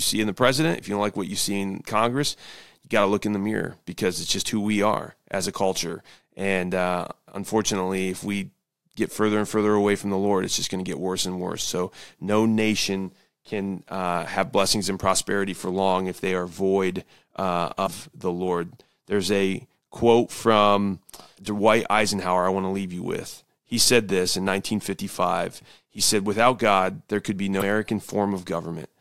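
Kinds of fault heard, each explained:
Damaged data in a compressed stream: corrupted bytes throw the decoder out of sync, causing brief glitches at 17.83 s and 27.57 s, each about 50 ms long.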